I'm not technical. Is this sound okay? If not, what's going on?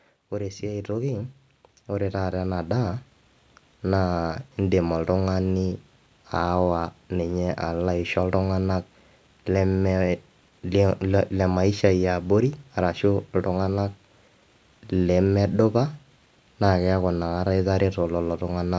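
No. From 0.3 to 3.06 seconds there is automatic gain rising. The call's volume control decided the speech was too quiet. So it slowly turned itself up. The voice and the background noise both grow louder together over those few seconds.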